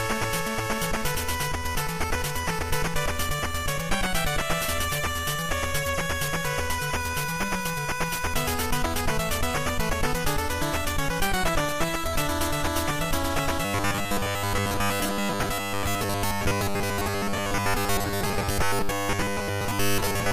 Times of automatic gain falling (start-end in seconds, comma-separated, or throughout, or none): none